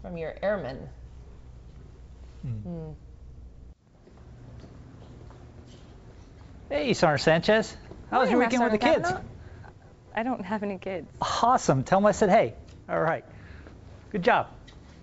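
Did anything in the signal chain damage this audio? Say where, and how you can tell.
Yes. The damage is at the network and buffer stage: clock drift between sender and receiver. The sending clock runs fast, by roughly 4 percent. Audio arrives faster than it plays, so the jitter buffer keeps filling and the receiver has to keep shedding material for the whole clip.

The repeated timing corrections run from 0.13 to 4.37 s and again from 6.75 to 14.28 s. In both stretches the sound plays at about 103 percent speed, with small, unevenly spaced hiccups where short pieces are cut to keep the buffer in step. Through all of this the band stops at 8 kHz, which fits a G.722 call path.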